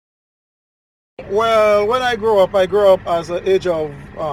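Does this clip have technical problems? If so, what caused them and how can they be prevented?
No, there are no technical problems to report.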